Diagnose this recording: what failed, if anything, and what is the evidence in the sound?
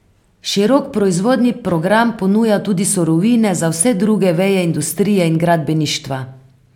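Nothing failed in this speech recording, and no stage in the chain leaves a trace anywhere in the sound. There is no evidence of a breakdown at any point, so there is no mechanism to diagnose.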